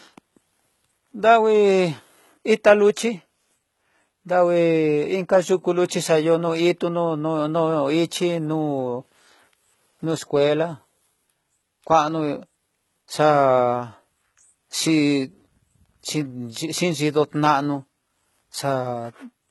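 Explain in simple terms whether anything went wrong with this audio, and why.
The speech carries HE-AAC compression damage from start to finish. The top end stops near 11.8 kHz, and the treble is likely rebuilt by copying lower bands upward, so s sounds come out gritty and metallic while the whole recording sounds heavily processed.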